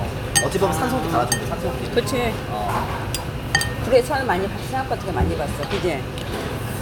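No technical faults can be heard anywhere in this sound.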